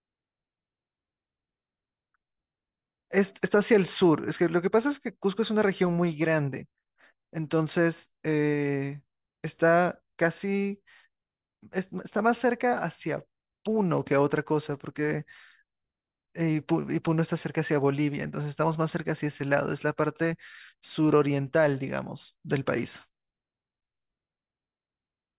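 No technical faults can be heard anywhere in the recording.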